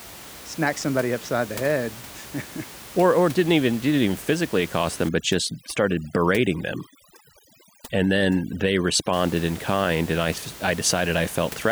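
From 5.09 s to 9.13 s, after "even physically accost them" and before "in kind and I", overdone noise removal sets in. Bands near the estimated noise floor are gated hard, taking quiet speech detail with them: the room noise drops and breaks up into twinkling specks.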